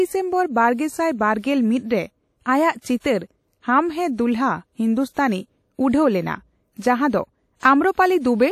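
From the start, the speech carries a ringing, washy coloration with hiss that swells and fades with the signal, likely from WMA compression at a low bitrate, which fits around 48 kbps. Quantisation noise is smeared across long transform blocks, and a spectrogram shows nothing above 15.4 kHz, with gaps where weak components were zeroed.

At 2.79 to 2.85 s comes a pre-echo: a hiss about 52 ms long leads into an attack that sounds softened. The codec's noise, sized for the loud onset, spilled backward through its block; a waveform shows a fuzzy ramp before the transient.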